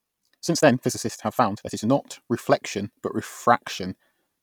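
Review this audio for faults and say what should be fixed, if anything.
From 0.0 to 1.9 s the speech runs about 1.59 times too fast, then drops abruptly to normal pace. Pitch stays the same throughout. The section sounds rushed. This is likely a time-stretched section, shortened by dropping short pieces of audio. To prevent it, fit the length by editing content rather than stretching the audio.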